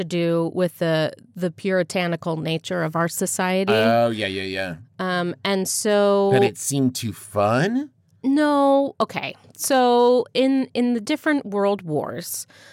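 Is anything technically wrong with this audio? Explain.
Yes, this speech clip has hard clipping in five places: 3.69 to 3.91 s, between "puritanical nature of our" and "yeah yeah"; 5.46 to 5.50 s; 5.89 to 6.45 s, just before "it seemed too"; a brief one at 9.01 s; and 9.71 to 10.44 s, right before "in the". The peaks go about 2 dB past what the signal path can handle, so their tops get sliced flat. Those flat tops add high harmonics, which you hear as a gritty crackle riding the loudest syllables.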